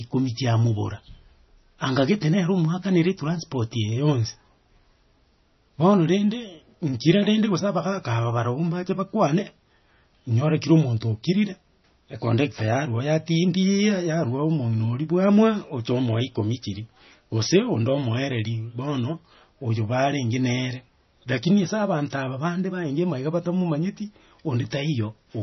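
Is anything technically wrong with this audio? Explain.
Yes. Throughout the speech, nothing is present above 6 kHz, and the sound is watery and swirly with metallic chirps on s sounds, likely from heavy MP3 compression at a low bitrate such as 24 kbps. Short of bits, the encoder cut the treble and zeroed weak frequency lines frame by frame.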